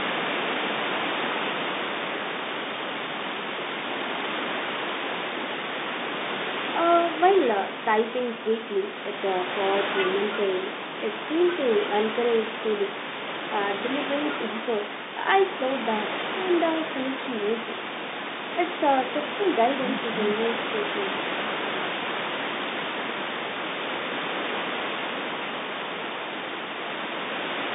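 No technical faults can be heard in this recording.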